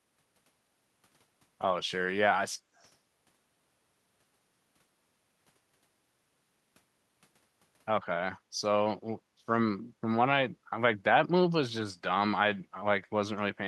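Speech recording with two echo-related faults. From 2.75 to 2.92 s a faint, delayed copy of the voice sits behind the direct sound, trailing it by 111 ms and lying very low, far below the speech. The likely cause is an echo leak: on a loudspeaker call, the far end's echo canceller failed to fully subtract the playback picked up by its microphone, so a residue was returned down the line. From 9.16 to 9.4 s the background is gated by the echo canceller. The room tone drops by about 13 dB for roughly a fifth of a second and then recovers. This happens because the canceller suppressed the microphone hard while loudspeaker playback was active, taking the ambient floor down with it until it released.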